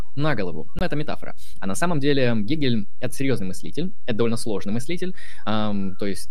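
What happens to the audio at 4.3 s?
At 4.3 s the speech carries a DC offset, as it does across the entire clip rather than at that instant alone. A constant value is added to every sample, so the waveform rides above or below the zero line instead of centring on it. The ear cannot hear this shift, but it eats into headroom on one side. On a spectrogram it shows as a steady band of energy at the very bottom, near 0 Hz.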